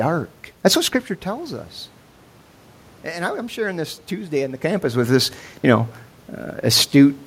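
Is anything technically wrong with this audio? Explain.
No, the signal shows no technical fault; the steady background noise belongs to the room, and the level changes around 1 s and again near 4.5 s are the talker moving relative to the microphone.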